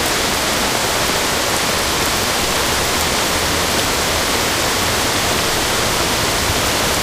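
Nothing is technically wrong with this recording of sounds.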